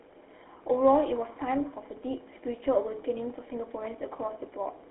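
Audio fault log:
Throughout, GSM full-rate codec: the whole speech clip has that buzzy, gravelly grain you get from the old GSM full-rate codec, and it's plainly audible. The codec rebuilds speech from a vocal-tract model fed with a sparse, regularly spaced pulse train, so the fine texture turns rough. It fits a roughly 13 kbps channel. The band is phone-narrow, about 300 Hz to 3.5 kHz, and there's nothing above 3.8 kHz, so the top end is gone.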